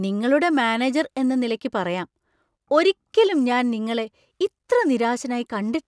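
No technical faults can be heard anywhere in the recording.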